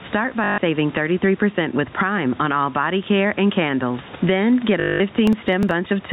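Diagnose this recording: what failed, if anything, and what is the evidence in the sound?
Gain pumping at the call-processing stage: the gain swings by around 10 dB under loud speech, likely from excessive input gain hitting a fast limiter.

Network packet loss with the last packet repeated, at 0.44–0.58 s and 4.8–5.0 s: short robotic stutters buzzing near 50 Hz, which fits 20 ms packets being replayed.

Processor overload crackle at the driver or buffer stage from 5.27 to 5.71 s: gritty tearing as buffers of roughly 5 ms are skipped, leaving tiny hard-edged gaps in a run.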